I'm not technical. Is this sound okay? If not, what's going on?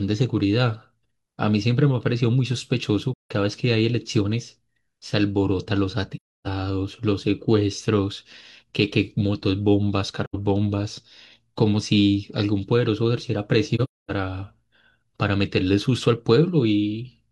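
No. The speech briefly vanishes four times, at 3.13 to 3.31, 6.15 to 6.47, 10.24 to 10.36 and 13.75 to 14.10 seconds. This is AAC frame loss with muting: missing chunks are replaced with silence that fades softly in and out.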